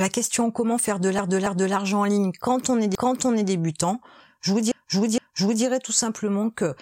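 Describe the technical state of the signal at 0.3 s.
At 0.3 s the speech signal is intact, with no audible fault at that moment.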